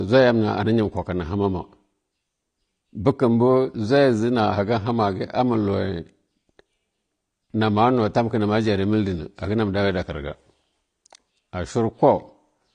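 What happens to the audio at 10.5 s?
At 10.5 s you're hearing the same dullness that runs through the whole clip: nothing above about 9.9 kHz and a smeared, warbly texture, likely AAC compression at roughly 32 kbps.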